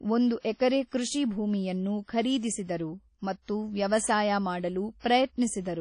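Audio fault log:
Throughout: WMA compression. Speech has a ringing, washy quality with hiss that swells and fades with the signal, and nothing above 10.1 kHz. This likely comes from a transform codec, which fits a bitrate near 32 kbps. Unlike broadband noise, the hiss tracks the level.
5.00–5.04 s: pre-echo. A short hiss leads into a sharp attack and softens it, spreading across about 46 ms. The block's quantisation noise, sized for the loud onset, fills the quiet gap before it. Unlike reverb, the smear comes before the attack, not after.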